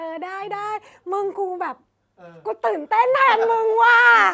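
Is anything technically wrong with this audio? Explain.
No, the speech shows no technical fault; it has passed through call microphone processing, which trims the lowest bass and leaves nothing above 8 kHz, as that path normally does.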